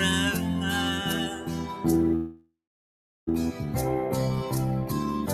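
From 1.36 to 1.66 s there's a spot where the sound was cut by the noise suppressor. It misread that stretch as noise and pulled it down by about 4 dB at the deepest point, for roughly a third of a second. Because the suppressor is working against the sound itself, steadier parts and decays come across quieter and cut short, and you hear the level sag and then recover.

At 2.15 s you get a call audio freeze that runs to 3.29 s. The last bit of sound gets stretched into a fading buzz or hiss, then drops to silence for about 0.72 s of that stretch. Then the audio picks up exactly where it stopped. Nothing is actually lost. It's about 1.12 s of inserted filler that pushes everything after it later by the same amount. That pattern most likely means packets were held up in transit and the jitter buffer ran dry.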